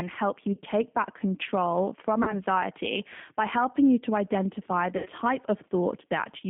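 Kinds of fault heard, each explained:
G.729 codec: throughout this speech the line runs at 8 kbit/s, with the sound confined to roughly 150 Hz to 3.5 kHz, so everything above that band is simply absent. The decoder rebuilds each 10 ms frame from a vocal tract filter, a pitch predictor and a handful of pulses, not the actual waveform, and that is why the speech comes across plainly rough and slightly synthetic.
VoIP packet loss concealed by the speech codec: at 0.53 to 0.60 s after "help you", at 2.23 to 2.36 s after "back control from", and at 4.97 to 5.10 s after "helping you to identify", the flow of speech smears into a stretched sound that sags in level. Audio went missing, about 40 ms in each of the first two, which fits two lost packets, and about 80 ms in the third, which fits four. The decoder filled each gap by repeating its last pitch and filter while lowering the gain, and the speech sounds weak for a moment afterwards while the decoder's state catches up.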